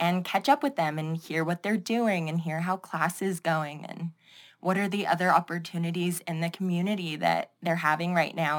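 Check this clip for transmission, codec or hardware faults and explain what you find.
One fault runs through the whole clip: crude rate conversion. The speech was resampled by repeating samples with no anti-aliasing filter, in a pattern that fits a change from 44.1 kHz to 48 kHz. The irregular steps add inharmonic error roughly 25 dB below the speech, heard as a gritty fizz riding on louder and brighter sounds.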